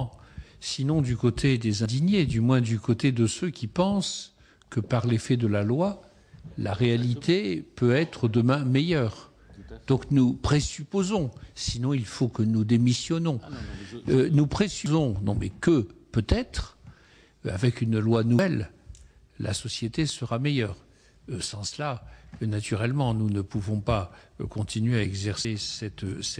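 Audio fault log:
1.86 s, 14.86 s, 18.39 s, 25.45 s: dropped buffer (overrun). Each point has an abrupt jump forward and no gap of silence, about a tenth of a second lost, nearer a third at 14.86 s. The likely cause is samples overwritten before being read, so the two sides are joined directly.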